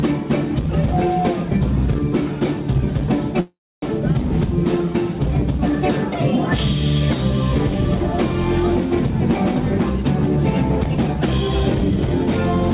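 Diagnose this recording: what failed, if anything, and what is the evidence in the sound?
From 3.40 to 3.84 s the sound stops and is held as a fading buzz that drops to silence for roughly 280 ms, then resumes with nothing lost. This is likely a call audio freeze: delayed packets emptied the jitter buffer, inserting about 0.42 s.

From 9.10 s to the end at 12.74 s the audio runs hurried at unchanged pitch, about 107% speed, within a band that stops at 4 kHz. This is a jitter buffer speed-up: the receiver trimmed many short pitch-period slices, about 0.3 s, to cut the extra delay.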